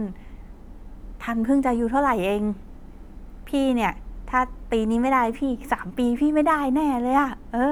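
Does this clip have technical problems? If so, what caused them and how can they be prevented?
No, the speech signal comes across as technically sound, with no audible defects that would call for a cause or a fix.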